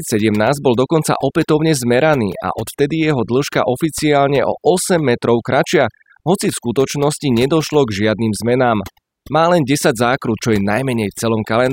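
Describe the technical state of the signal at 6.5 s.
Overdone noise removal is present at 6.5 s, as it is across the whole clip. The noise reduction was set far too aggressively, so any frequency band sitting close to the estimated noise level gets pulled down hard or removed, and the softer components of the speech are caught along with it. The background drops and breaks up into twinkling specks.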